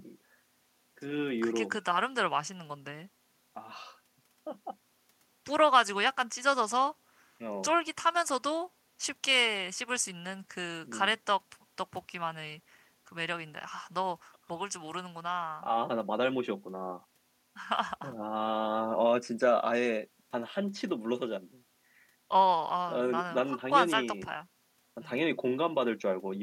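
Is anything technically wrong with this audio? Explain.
No, nothing technically wrong can be heard in this speech recording. It carries no audible fault that needs explaining.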